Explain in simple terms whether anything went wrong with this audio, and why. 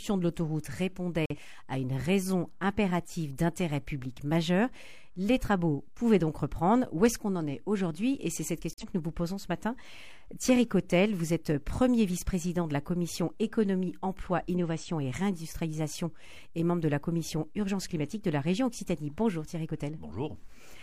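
Two short dropouts occur, at 1.26 to 1.37 s and at 8.73 to 8.84 s. Each lasts about a tenth of a second and starts abruptly. This is a corrupt frame muted: damaged compressed data was rejected by the decoder, and silence filled the gap while the timing stayed intact.

At 14.53 s a brief, faint wrong-sounding glitch lasts about 50 ms. This is a corrupt frame decoded: damaged data was played anyway, so a couple of frames' worth of sound landed at the wrong frequencies.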